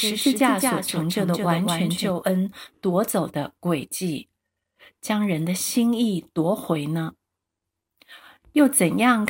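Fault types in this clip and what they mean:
Doubled audio track: The audio was likely captured twice, with a slower path or an edit leaving a second copy out of step. A full-band copy trails about a fifth of a second behind, a few dB quieter and with no room colour. It is present from the start and cuts off abruptly at about 2.1 s.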